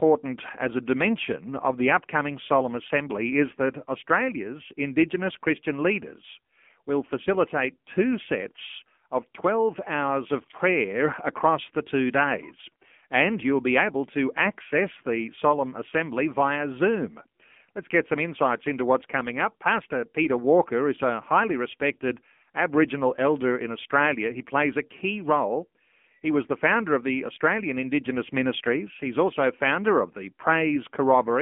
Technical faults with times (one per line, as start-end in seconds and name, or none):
0.00-31.41 AMR narrowband mobile codec